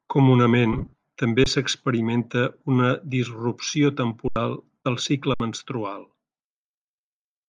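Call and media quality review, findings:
Grainy, breathy edge on the speech throughout, with hiss-like fill in the upper band. Likely Bluetooth LC3 compression; sound fits roughly 48 kbps at 10 ms frames. Spectrogram shows thin, speckled noise-filled bands above the speech harmonics instead of clean structure.

Lost LE Audio frames, 0.73–0.93 s: 180 ms of audio lost in patches across that span, longest run about 50 ms. The LC3 decoder's concealment smears the sound into noise. Spectrogram shows blurred, harmonic-less blocks; the waveform turns hashy rather than dropping to zero.

Underrun with held sample, three gaps: 1.44–1.46 s (20 ms), 4.28–4.36 s (80 ms), 5.34–5.40 s (60 ms). The output buffer emptied and the last value held, so sound stops abruptly. Audio was skipped in each gap. Waveform: flat offset line, then a jump.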